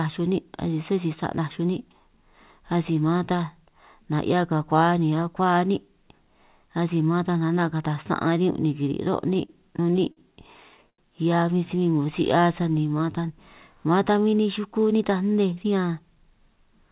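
From 9.34 to 11.00 s the audio falls into repeated stalls (stutter): seven times the jitter buffer ran dry because packets came in late, and the receiver stretched the last sound to cover each wait, about 200 ms in all, the longest about 85 ms, roughly an eighth of that stretch. Unlike dropouts, nothing is lost. The audio hangs and smears, then resumes where it left off, so it drags rather than skips.

From 14.11 to 15.01 s a jitter buffer speed-up sets in. With too much audio queued, the receiver trimmed tiny pitch-period slices, about 70 ms in total, so the sound runs at roughly 108% of normal speed. Pitch stays put, which separates it from a sample-rate or playback-speed error that would raise the voice. Here the speech just sounds briefly rushed. Throughout, the call path's band limit at 4 kHz, which fits G.711 A-law, leaves the sound narrowband.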